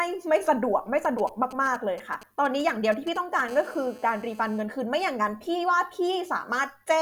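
From 1.05 to 3.41 s, galloping dit-dit-dit ticks and brief raspy 217 Hz buzzes sit roughly 15 dB under the speech: GSM signalling bursts from a nearby 2G phone, rectified by the audio circuit. Then, from 3.49 to 4.61 s, a steady, hard, harmonic-rich 217 Hz rasp about 24 dB below the speech is GSM phone buzz, a nearby 2G phone transmitting in bursts 217 times a second during a call.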